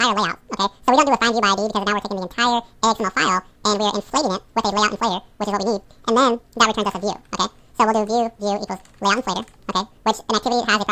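Wrong sample rate, throughout: the audio runs at twice its proper speed and sits a full octave (12 semitones) high, which fits material recorded at 16 kHz being played back at 32 kHz with no conversion. Speed and pitch shift together, so everything sounds rushed and squeaky.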